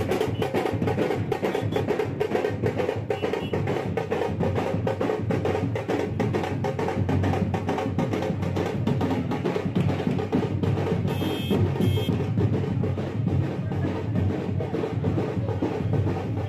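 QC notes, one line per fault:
No technical faults can be heard anywhere in the audio.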